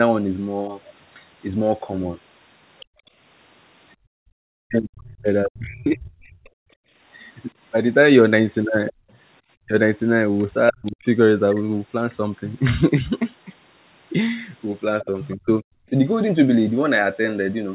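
From 2.8 to 3.94 s a second, fainter voice sits under the talker, roughly 25 dB below the speech. This is the other side's voice leaking through, likely loudspeaker playback that the echo canceller failed to fully subtract from the microphone. It returns from 8.9 to 10.92 s at a similar low level, and again more briefly and somewhat louder, around 20 dB down, from 15.02 to 15.36 s.

Between 2.86 and 9.11 s the room background is gated by the echo canceller. While the far end plays, the canceller clamps the microphone, and the background noise drops by about 40 dB before coming back. These holes add up to around a second in all.

From 4.6 to 11.06 s the talker's speech is suppressed in double talk, likely because the canceller could not separate near speech from echo while both sides were active and so attenuated everything. The voice dips by as much as roughly 40 dB, in pieces totalling about two seconds. 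It happens again from 15.02 to 15.92 s, with drops up to roughly 35 dB over a few hundred milliseconds. Here the talker's own voice breaks up, not just the background. Across the whole clip the G.711 call path limits the band to 4 kHz.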